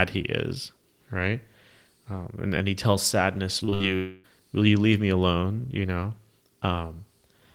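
Right after "and and he tells", from 3.59 to 3.82 s, the speech turns choppy. This is repeated packet loss (robotic sound): four separate holes, the longest 59 ms and about 120 ms in total, were each patched by stretching the preceding sound, so concealment covers about half this short span. What sets it apart from a single long gap is the rapid alternation of real audio and brief synthetic fill, giving a stuttering, mechanical texture.

From 3.96 to 4.26 s, just before "will you leave me", the sound is replaced by one unbroken stretch of about 0.28 s of continued, buzzy fill. It then resumes with that portion simply absent. The likely cause is a long network dropout, where nothing arrived for the whole stretch. Unlike the choppy loss a moment earlier, there is no real audio mixed in. The fill never decays to silence, which fits a hole just short enough for the concealment to bridge completely.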